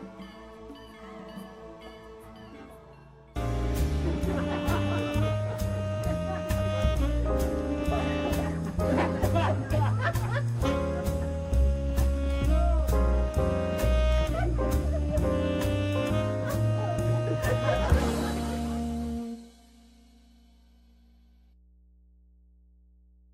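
Mains hum runs through the whole clip: a steady 60 Hz tone sitting roughly 30 dB below the audio. That's the power line leaking into the signal path, from either a ground loop or a transformer close to the cabling.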